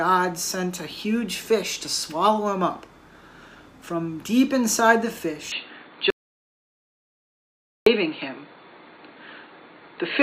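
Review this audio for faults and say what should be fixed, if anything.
Input switched to a poorer device, from 5.52 s to the end. At that point the sound abruptly turns duller and boxier, with nothing above 4.5 kHz, and the level changes by roughly 5 dB. A new, faint noise floor appears around 45 dB below the signal. There is no gap at the change. A narrower band, different tone and different noise at once most likely mean the recording moved to another microphone or a headset's call profile. Prevent this by locking the input device in the system settings and disabling automatic switching to headsets during recording.

Audio dropout to silence, from 6.10 s to 7.86 s. About 1.76 s of the sound is lost, leaving silence with no room tone at all, and the sound resumes abruptly afterward. Silence rather than quiet background points to the input likely being lost, through a disconnected device, a failed link or a momentary mute, while the recorder kept writing empty samples. 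The missing material cannot be recovered and needs a retake. Prevent this by securing cables and wireless links and monitoring input levels live while recording.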